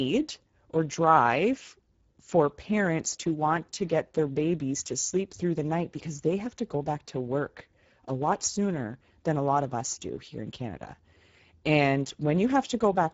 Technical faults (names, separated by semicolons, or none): Speex codec